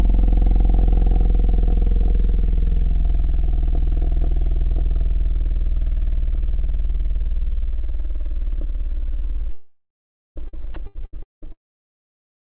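Between 9.52 and 10.38 s the stream likely suffered a long network dropout, with about 0.84 s of audio never arriving. The receiver filled the hole by stretching the last received sound, which comes out as a fading buzz-like tail. For roughly the final 0.48 s of the gap only silence remains. The sound then resumes further along, with the missing stretch simply absent rather than delayed.

Almost immediately afterwards, from 10.48 to 11.47 s, the connection shows repeated packet loss, producing a robotic sound. Six separate gaps open in under a second, the longest 190 ms, and each is patched by extending whatever came just before it. About 42 percent of that span is concealment rather than real signal. Fragments of sound alternate with synthetic continuations, giving a choppy texture with pieces missing.

Inside that broken stretch, from 10.74 to 10.76 s, the sound is dropped by the voice detector. 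The sender most likely judged this brief moment to be background and stopped transmitting it. The receiver inserted standard comfort noise for those 20 ms, and about 10 ms of actual sound is lost. It is heard as a tiny flat patch of steady noise or near silence. Across the whole clip, nothing sits above 4 kHz, consistent with the G.711 A-law call codec.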